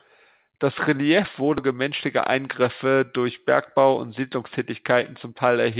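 At 1.58 s the speech skips ahead: about 0.4 s of audio was dropped and the two sides are butted together with no gap. It sounds like a clipped jump. The waveform and the spectrogram show an abrupt seam with no silence, under a band that stops at 4 kHz, which fits narrowband G.711.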